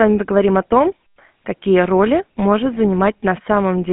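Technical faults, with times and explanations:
throughout, GSM full-rate codec: a pulse-excited vocal-tract model, consistent with a 13 kbps coder, rebuilds the speech, leaving plainly audible buzzy, gravelly roughness and nothing above 3.8 kHz.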